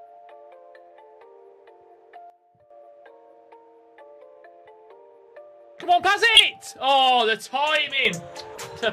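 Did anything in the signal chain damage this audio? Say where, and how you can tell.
Yes. At 2.30 s the level drops by about 12 dB, background included, and snaps back at 2.70 s. From 8.05 s to the end it jumps up about 8 dB. Those are sudden gain jumps, likely a gain setting applied in processing with no ramp.

There are two corrupt frames decoded at the codec stage. At 6.35 to 6.41 s a loud burst hits, peaking near -5 dBFS, which fits a couple of damaged frames. At 8.55 to 8.61 s a much quieter blip, around -25 dBFS, suggests several more. In both, the decoder played garbled data and put energy at the wrong frequencies.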